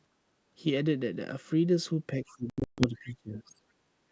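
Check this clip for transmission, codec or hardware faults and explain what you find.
Three faults are audible, all typical of a wideband call path.

From 0.11 to 0.33 s the background is gated by the echo canceller: room sound dips about 12 dB while the far end plays, then returns.

Between 2.23 and 3.62 s the speech dips by roughly 20 dB and thins in pieces, likely speech suppressed in double talk, with the canceller muting the talker against far-end echo.

From 2.50 to 2.85 s there is packet loss on an ADPCM call: 240 ms of hard-edged holes, the longest 140 ms, pointing to around ten lost packets. The speech comes back slightly distorted as the decoder resynchronises. Unlike suppression, these gaps are abrupt, not faded.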